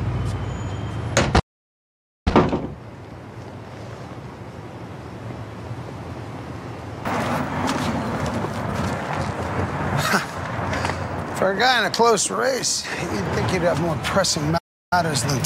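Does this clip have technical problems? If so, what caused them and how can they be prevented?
Yes. There are two playback stalls. The sound stops mid-flow at 1.39 s and stays silent until 2.28 s, a gap of about 0.87 s. A shorter one runs from 14.57 s to 14.93 s, about 0.34 s. Each time, the output simply goes dead and then resumes. The likely cause is the player running out of buffered data, or its audio thread being blocked. A larger playback buffer and a high-priority audio thread would prevent it.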